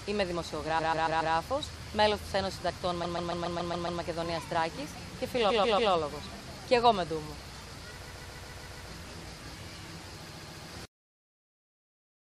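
Repeated frames cause stutters at 0.78, 3.03, 5.49, 8.05 and 10.28 s. Each time, a block of about 139 ms replays three to seven times.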